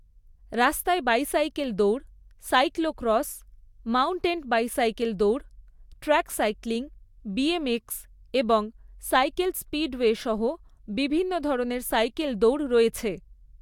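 No technical faults can be heard anywhere in the recording.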